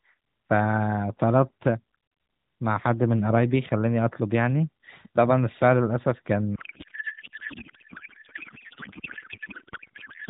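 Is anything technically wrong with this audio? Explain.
Yes. From 6.56 s to the end of the clip, there is a codec payload misread. The sender and receiver of the AMR narrowband stream disagree on how each frame's bits are packed, which points to octet-aligned frames being read as bandwidth-efficient. The decoder still accepts every frame but pulls its parameters from the wrong bit positions. The speech, band-limited below 4 kHz before this point, gives way to garbled noise and warble that barely tracks it and persists to the end.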